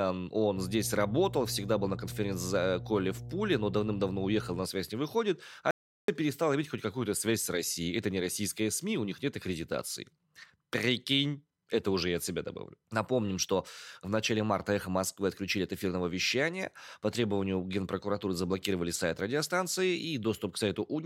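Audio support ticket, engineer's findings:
Mains hum, 0.56 to 4.62 s, ending just before "связь не выходит". Steady 60 Hz tone under the speech, strong, roughly 10 dB below the voice. Probable component: ground loop or transformer near the input cabling. Power line coupling into the signal path.

Audio dropout to silence, 5.71 to 6.08 s, about 375 ms, ending just before "перестала иметь хоть". Speech cuts out mid-flow. Gap is dead digital silence, no room tone. Likely cause: input lost, with the recorder still writing silence.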